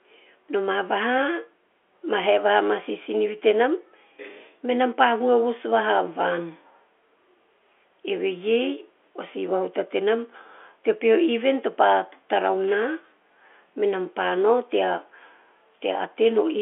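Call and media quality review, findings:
No faults found; narrowband G.711 telephone line, as expected.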